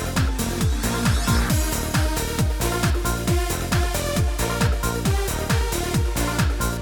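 No technical faults can be heard anywhere in the clip.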